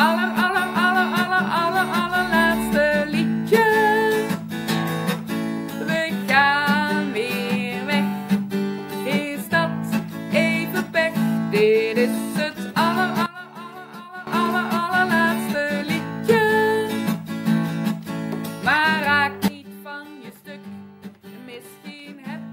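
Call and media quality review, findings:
Sudden gain jump, 13.26 to 14.27 s. Level drops about 15 dB in one step, background noise with it, then snaps back. Sudden gain jump again at 19.48 s, about 13 dB down, holding to the end. Likely a digital gain stage applying a new setting or bit shift without a ramp, so the level changes between adjacent samples. Check the gain-control path for missing smoothing.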